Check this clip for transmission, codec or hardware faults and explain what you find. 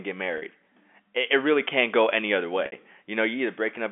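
Two brief glitches in the speech come from packet loss with pitch repetition. From 0.38 to 0.42 s the sound freezes for about 40 ms into a slightly held, buzzy tone. At 2.66 to 2.72 s, just after "can't go any other", the same buzzy hold lasts about 60 ms and begins to fade before the speech picks up again. In each gap audio went missing in transit, which fits two and then three 20 ms packets. The receiver bridged the hole by looping the last pitch period and tapering it down. The narrow telephone band of the G.711 coding carries through both events.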